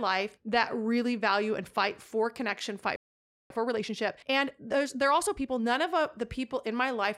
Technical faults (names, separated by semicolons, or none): playback stall; time-compressed catch-up